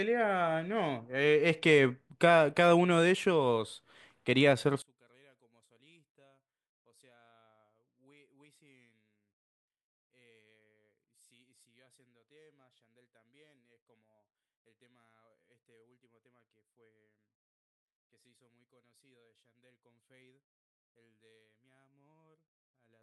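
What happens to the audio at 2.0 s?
At 2.0 s the speech carries on without any audible fault; nothing breaks, drops out or distorts at that point.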